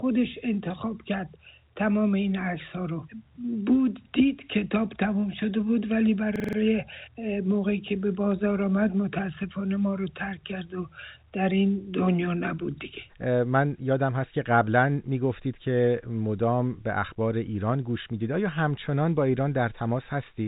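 From 6.36 to 6.57 s, a rapid stutter: a system hang loop repeated one 43 ms slice five times at 23.4 Hz, which fits a 2048-sample buffer. Almost no audio is lost. The narrowband call path leaves nothing above 4 kHz.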